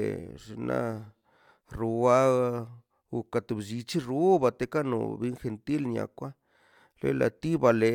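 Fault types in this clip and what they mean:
No fault types are present in this clip.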